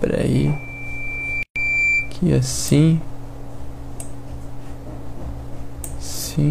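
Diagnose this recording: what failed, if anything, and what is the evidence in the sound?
A steady tone at 2.4 kHz rises out of the sound from 0.34 s, swelling over about a second and a half to roughly 5 dB above it before stopping at 2.19 s. This is loudspeaker feedback squeal in the analogue acoustic path: the microphone hears its own loudspeaker, and at that frequency the loop gain tops one.

The sound drops out for 129 ms, from 1.43 to 1.56 s, with smeared edges, then resumes exactly where it left off. This is a gap at a join of encoded pieces, a codec-stage fault: separately encoded segments were spliced without trimming their start delay and final-frame padding.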